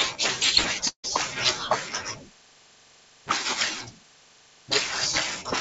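From 0.88 to 1.06 s the speech cuts out, and a brief buzzy continuation of the last sound fades into about 90 ms of silence before speech resumes with a portion missing. This is likely a long network dropout, with about 160 ms of audio lost and concealed by the receiver. Throughout, the band stops at 8 kHz, which fits a wideband call codec such as G.722 at 64 kbps.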